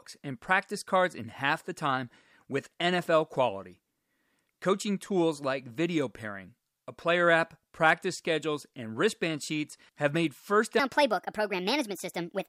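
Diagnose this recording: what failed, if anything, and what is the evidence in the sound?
Wrong sample rate, from 10.80 s to the end: the speech suddenly runs 1.38 times faster and about 5.5 semitones higher, with speed and pitch rising together. That fits 32 kHz samples clocked out at 44.1 kHz with no conversion, a failure at the playback stage.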